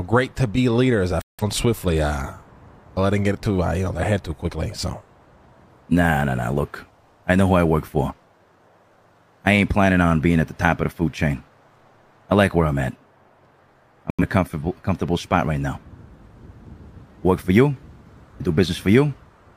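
Digital broadcast dropouts at 1.22–1.44 s and 14.10–14.24 s: the receiver muted on bad frames, leaving flat-line waveform holes and blank vertical spectrogram gaps.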